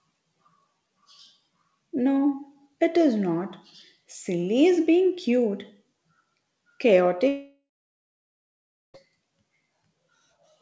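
A long network dropout runs from 7.28 to 8.96 s, most likely from audio that stopped arriving. The last sound trails off as a fading buzz, then about 1.28 s of near-silence follows before the speech resumes with roughly 1.66 s lost, heard through a band-limited call path that stops at 8 kHz.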